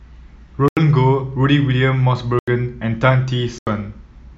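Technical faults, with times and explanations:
0.68–0.77 s, 2.39–2.48 s and 3.58–3.67 s, block of digital silence: the speech drops abruptly to silence three times, each gap 85 ms long, and returns with no fade. The identical length of every dropout fits a 4,096-sample output buffer going unfilled when its deadline passed, with the player writing zeros in its place.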